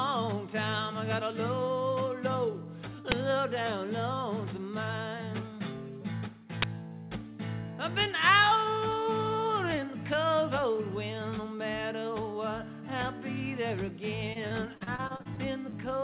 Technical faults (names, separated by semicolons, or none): uninitialised buffer; repeated packet loss (robotic sound)